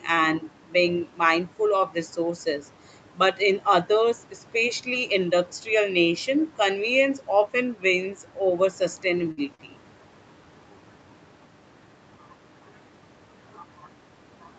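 Right around 9.31 s there's a burst of packet loss that runs to about 9.40 s. A short run of packets never showed up in time, so the receiver padded the hole by carrying the last bit of sound forward for about 57 ms and letting it sag in level. It then picks up again about 60 ms further along, so that slice of speech is simply gone. You hear a brief smeared, fading tail and then a small jump.

Just after, from 9.55 to about 9.62 s, there's a short stall from a late packet. This time the packet arrived late rather than not at all. The jitter buffer ran dry, and the receiver stretched the last sound for about 41 ms until the packet landed, then carried on from the same spot. Nothing's missing, but that moment hangs a touch too long with a faint buzzy dip, and the timing shifts by about 41 ms. All of it sits inside the 8 kHz top end of the Opus call path, which is just how that path is set up.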